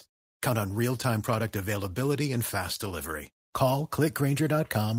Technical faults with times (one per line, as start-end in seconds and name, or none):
none